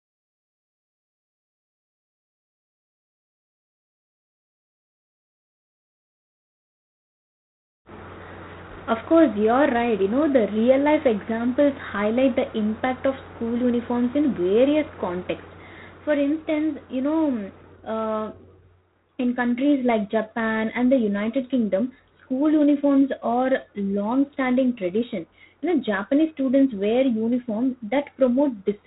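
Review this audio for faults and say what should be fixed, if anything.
G.726 ADPCM damage runs through the whole clip. Speech carries a harsh, rasping hiss that tracks its level, which fits 24 kbit/s coding, and nothing passes above 3.9 kHz. To prevent it, route the call through 32 kbit/s G.726 or a wideband codec.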